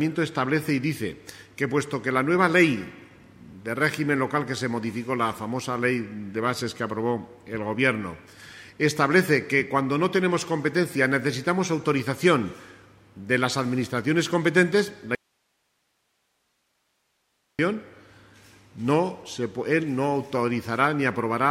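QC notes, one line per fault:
15.15–17.59 s audio dropout to a faint residue: an abrupt 2.4 s cut to hiss roughly 50 dB down, not a fade; likely an upstream break on a live path.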